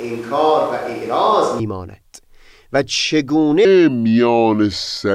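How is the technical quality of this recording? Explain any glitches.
The recording has two clear faults, one at each end of the speech.

From the very start until 1.59 s there is a switch to a distant microphone. The close microphone's feed is likely missing, so the pickup comes from one further from the talker. The speech sounds roomy and hollow with a thinner low end, at much the same level as what follows. Room noise sits roughly 25 dB below the speech. At 1.59 s the sound snaps abruptly to the closer, drier pickup.

From 3.65 s to the end is a section at the wrong speed. It plays at 0.766 times its original rate, likely because that stretch was handled against the wrong clock. Speed and pitch drop together, so the speech abruptly turns slower and deeper, roughly five semitones lower, and stays that way to the end.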